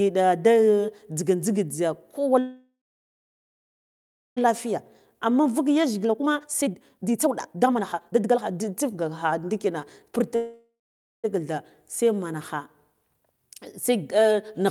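At 2.39 s, just after "jza kowa", packets were likely held up in transit and the jitter buffer ran dry, causing a call audio freeze lasting until 4.39 s. The receiver stretched the last sound into a fading buzz or hiss, then about 1.6 s of silence, before resuming where it had stopped. Nothing was lost, but roughly 2.0 s of gap was inserted, pushing everything after it later.

From 4.49 s to 10.28 s comes a jitter buffer speed-up. The delayed audio arrived in a bunch and overfilled the buffer, so the receiver trimmed short pitch-period-sized pieces again and again to work the backlog down, about 2 s in total. The speech plays at roughly 133% speed while keeping its pitch, which makes it sound rushed.

At 10.35 s a second freeze, likely from another stall in packet delivery, holds the audio until 11.26 s. The last sound is drawn out and fades, then about 0.52 s of silence follows before playback resumes. 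About 0.88 s is added, with nothing missing.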